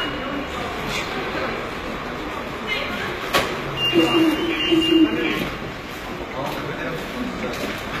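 Throughout the clip, the treble sounds gritty and metallic, and nothing reaches above 14.9 kHz. The likely cause is HE-AAC compression, with the upper band rebuilt from copied lower bands whose harmonics no longer line up, which fits a bitrate near 20 kbps.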